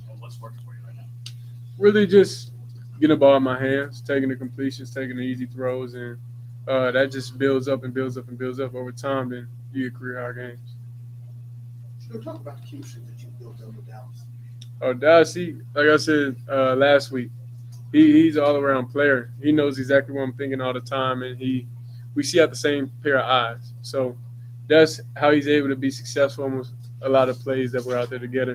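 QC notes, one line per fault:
Throughout: noise suppressor applied to music or sounds. Gain swings by about 15 dB as sustained tones and tails are read as noise, so the sound pumps rather than simply sounding quiet.
0.00–3.01 s, 3.93–6.67 s, 9.43–17.93 s, 19.25–19.42 s, 21.62–25.16 s, 26.68–27.46 s: sound cut by the noise suppressor. Held or decaying sound sinks by about 4 dB while attacks pass, unlike a fade or dropout.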